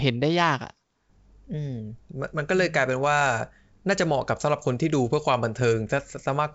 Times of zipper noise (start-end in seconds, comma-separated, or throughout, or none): none